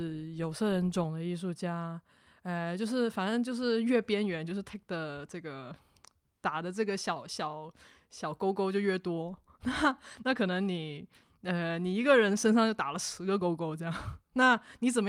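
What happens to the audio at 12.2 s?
Nothing goes wrong at 12.2 s; the speech there comes through intact, with no dropout, click, distortion or other fault at that moment.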